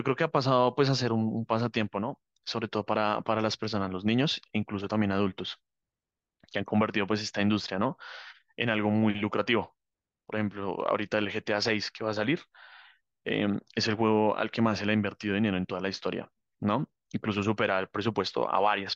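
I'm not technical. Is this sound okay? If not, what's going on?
Yes, this one's fine, and there's nothing going wrong anywhere in it that you'd need to worry about.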